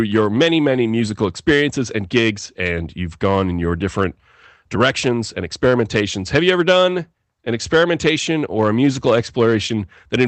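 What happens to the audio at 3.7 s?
Loud speech peaks at 3.7 s crackle, as throughout the clip: hard clipping, with the signal driven about 7 dB past full scale, so roughly 0.7 percent of samples have their tops flattened.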